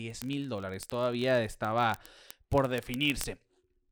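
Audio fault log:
0.10–3.92 s, word clock ticks: a steady run of sharp ticks, roughly every 20 ms and around 150 in all, as the receiving clock drifts about 0.1% from the sender's and a single sample gets dropped or doubled at each slip.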